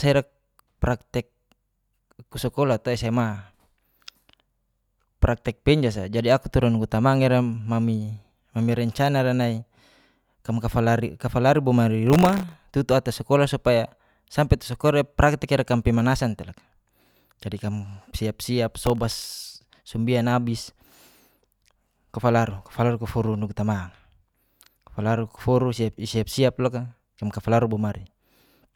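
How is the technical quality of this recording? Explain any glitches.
The recording has two short bursts of gritty crackle, at 12.07–12.53 s and at 18.82–19.26 s, just before "sembian abis". This is processor overload crackle: the processor missed many buffer deadlines in a row, with buffers of under a millisecond, and each miss replayed a fragment of old audio with hard edges.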